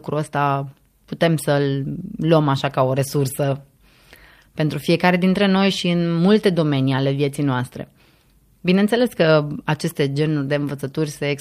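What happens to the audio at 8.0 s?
Nothing goes wrong at 8.0 s: the speech carries on intact there, with no dropout, click, distortion or other fault at that point.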